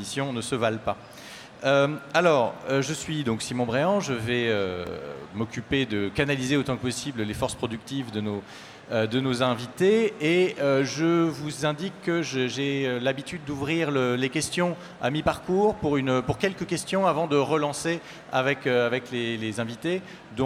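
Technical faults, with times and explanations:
4.87 s, repeated buffer: fresh audio failed to reach the output in time, so the device filled the gap by playing its most recent buffer a second time. The repeated slice lasts only about 2.9 ms, which fits a 128-sample buffer, and it plays once more with a hard seam at each join. At that tiny size the repeat is too brief to register as a stutter and comes across as a click or brief buzz. Essentially nothing of the audio goes missing.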